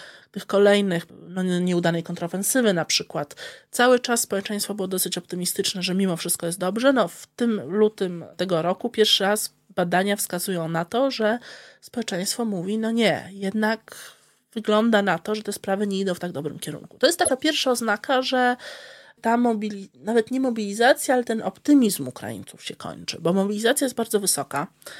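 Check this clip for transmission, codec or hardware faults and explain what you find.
Corrupt frames were decoded at two points in this speech, each heard as a short glitch. The first runs from 14.01 to 14.04 s, between "mówi no nie jednak" and "wygląda na to że". It peaks around -25 dBFS. The second, from 17.24 to 17.31 s just before "pierwsza oznaka że", is longer and much louder, around -10 dBFS. It spans what seems to be a few frames. Damaged bits made the decoder rebuild energy at the wrong frequencies.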